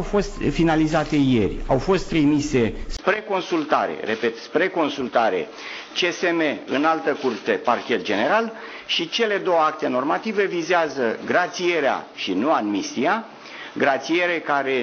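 Input switched to a poorer device at 2.97 s, likely: after a 20 ms gap the audio narrows to nothing above 6.3 kHz, with a new faint noise floor.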